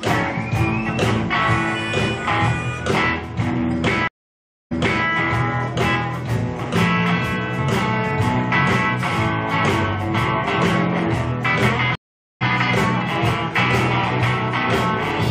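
Two stream reconnects: 0.63 s of silence at 4.08 s, resuming 0.35 s earlier, and 0.45 s at 11.95 s, resuming roughly 0.3 s later.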